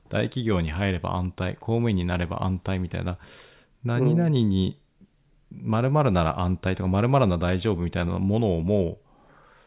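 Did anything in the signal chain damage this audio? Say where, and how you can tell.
No, nothing in the signal chain has audibly damaged this speech recording. No stage leaves any sign that can be heard, so there is nothing to trace back to a point in the chain.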